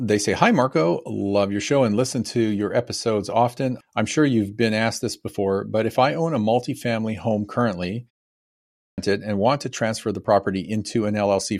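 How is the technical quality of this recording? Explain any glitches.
There is one audible glitch, a clipped start after a pause. At 8.57 s, following "a multifamily home currently" and a short gap of 0.55 s, the next phrase bursts in abruptly from silence with its opening missing, and the sound only settles by 8.98 s, just before "and want to transfer". About 0.41 s is swallowed. The cause is the output device dozing off during the brief silence and needing time to wake and lock again, so the first part of the returning sound never reaches the output. Elsewhere nothing is cut off.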